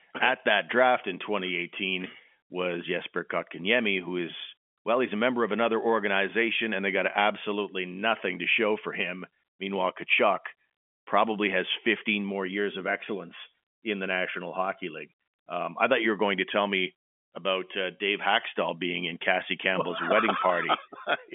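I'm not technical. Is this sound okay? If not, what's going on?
Yes, nothing stood out as a problem on listening to this speech.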